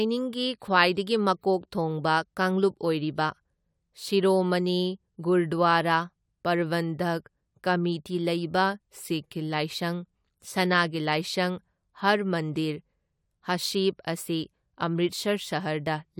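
Speech recording, no technical faults heard anywhere in it.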